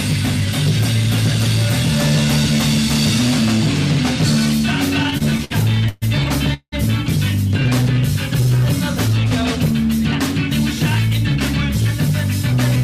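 From 5.03 to 6.74 s there's a run of repeated stalls (stutter): the jitter buffer kept running dry, so ten gaps got papered over with 460 ms of stretched sound, the longest 185 ms. Then from 7.49 to 9.25 s a jitter buffer slow-down repeats tiny slices to rebuild reserve, adding 102 ms, so things drag at 95% speed without changing pitch. Finally, from 11.36 s to the end, a jitter buffer speed-up trims about 70 ms of excess buffering, pushing the audio to 104% speed.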